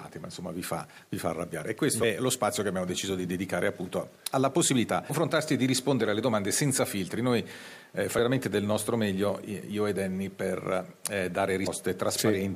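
The audio lurches forward at 2.02 s, 5.09 s and 11.66 s. These are compressed frames skipped: runs of what sound like 23 ms frames went unplayed, dropping roughly 0.3, 0.4 and 0.2 s.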